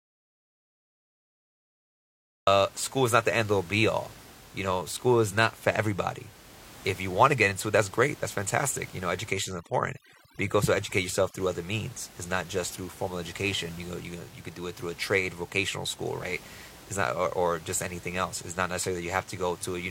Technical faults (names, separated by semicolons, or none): audio dropout to silence; overdone noise removal; overlap between stream segments